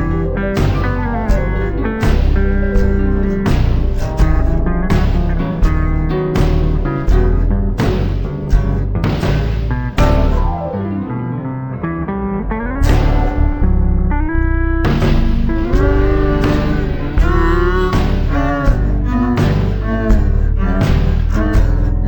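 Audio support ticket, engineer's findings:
Stereo read as mono, whole clip. Interleaved L/R samples consumed sequentially as one channel, likely a channel-count mismatch between file header and decoder or playback path. Each frame becomes two consecutive samples. Result: playback at 0.5x speed, pitch down 12 semitones, a full octave low. Mirror-image content folded into the upper half of the spectrum, fainter than the main signal. Check channel metadata and reader configuration.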